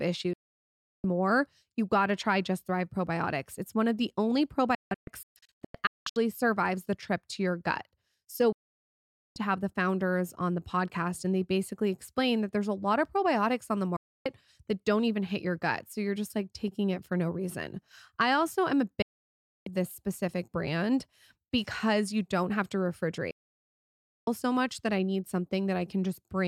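Digital broadcast dropouts mute the speech six times: 0.33 to 1.04 s, 4.75 to 6.16 s, 8.52 to 9.36 s, 13.96 to 14.26 s, 19.02 to 19.67 s, and 23.31 to 24.28 s. Each time, the receiver lost good frames and silenced itself with a 3 ms fade. The 4.75 s dropout breaks into short holes, the longest 0.19 s. Speech resumes at "more you gotta try", "to have the founders" and, after "I also am a", "this specific brand because". The missing sound never returns.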